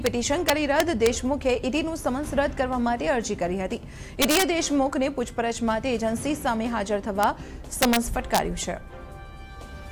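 A gain stage lets samples run past the integer limit and wrap to the opposite sign: integer overflow. Loud peaks flip across the full range, giving harsh cracks at 0.06 s, 0.49–1.07 s, 4.22–4.43 s, 7.23 s, 7.82–7.97 s and 8.35–8.38 s.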